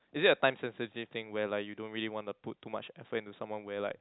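No faults to report: the speech carries the narrow band of G.711 telephone coding, with nothing above 3.8 kHz, and nothing else goes wrong anywhere in the clip.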